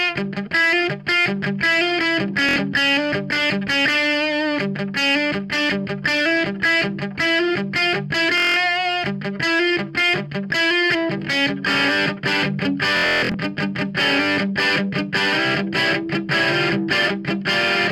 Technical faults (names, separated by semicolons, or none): Bluetooth stutter